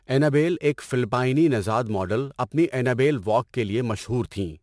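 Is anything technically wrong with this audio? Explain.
Yes. Throughout the clip there is aliasing: the speech was resampled from 48 kHz down to 22 kHz with no anti-aliasing filter, so content above 11 kHz folds back below it at wrong pitches. Sibilants sound gritty and metallic, and the folded energy sits roughly 30 dB under the speech, running hard up to the band edge.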